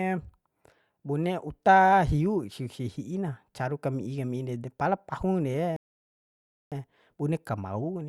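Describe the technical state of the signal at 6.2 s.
At 6.2 s the signal is silent. It sits inside a rebuffering stall that runs from 5.76 s to 6.72 s. The player has used up its downloaded audio and halted until more data arrives. The speech cuts off abruptly into silence. It then picks up at exactly the point where it stopped. No speech is skipped or lost. The pause simply inserts about 0.95 s of extra time into the clip.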